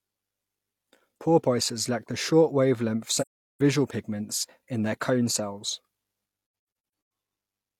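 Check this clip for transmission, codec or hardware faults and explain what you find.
Two dropouts are present. AAC frame loss with muting at 3.20–3.61 s and 6.42–7.10 s: lost frames were decoded as silence, so overlapping windows fade the speech out and back in, leaving a soft-edged gap of about 384 ms, then scattered gaps totalling about 427 ms, the longest around 150 ms.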